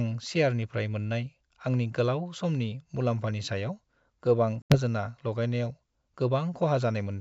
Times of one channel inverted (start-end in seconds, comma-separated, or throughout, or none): none